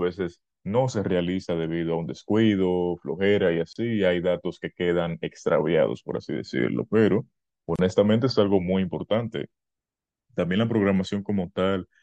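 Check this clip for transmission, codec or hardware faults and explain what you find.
Two faults are present: codec damage across the whole clip and two brief dropouts at joins.

MP3 compression, throughout. The speech sounds plainly watery and swirly, with a dulled top end, and sibilants turn metallic and chirpy. This is likely MP3 compression at a bitrate that fits about 64 kbps. With too few bits, the encoder cuts the treble at a fixed frequency and discards quiet spectral detail that flickers in and out from frame to frame. The same bit shortage also smears consonant attacks.

Gap at a join of encoded pieces, at 3.73 to 3.76 s (27.4 ms) and 7.76 to 7.79 s (32.0 ms), spaced 4.0 s apart. Each is a short hole of silence in continuous speech, with edges softened by the codec. The sound then resumes exactly where it stopped. The regular spacing points to 4-second pieces that were encoded separately and joined without trimming. 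Each piece kept the encoder's start-up delay and the padding on its last frame, and that leftover silence is what opens up at every join.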